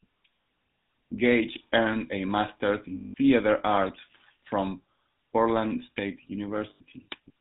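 Throughout, the speech carries the buzzy, gravelly roughness of the GSM full-rate codec, plainly audible and consistent with its 13 kbps mode. The codec rebuilds the voice from a vocal-tract model driven by a sparse, regularly spaced pulse train, so fine detail is lost. On a spectrogram, energy stops sharply at 4 kHz, and the harmonics look smeared and grainy rather than cleanly striated.

Lost GSM frames follow at 0.42 to 0.46 s (40 ms), 2.96 to 3.14 s (180 ms) and 6.70 to 6.82 s (100 ms). In each gap the decoder repeats the last good frame, so the sound hangs as a rough, metallic ring. The waveform shows a repeating envelope, and the spectrogram shows frozen horizontal bands, longest in the 180 ms gap.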